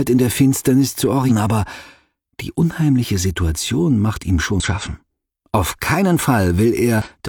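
Three short bursts of damaged data in the compressed stream turn up at 1.26 to 1.31 s, 4.60 to 4.66 s and 7.02 to 7.08 s, each lasting about 50 to 60 ms. At each one, bad bytes reached the decoder, which misread the frames, lost sync and had to hunt for the next valid frame header. You hear that as a brief chirpy squawk or blip cutting across the sound before it settles again.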